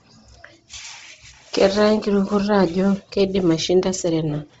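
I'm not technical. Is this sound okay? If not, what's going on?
No. The audio has most likely passed through Bluetooth LC3 compression, the squeezing method used by newer Bluetooth earbuds and headsets, set so tight that it throws away much of the fine detail. Throughout the speech, the highest sounds stop completely at about 7.8 kHz, and what remains near the top is partly filled in with artificial noise. That gives the voice a breathy, grainy edge and a dull, boxed-in quality.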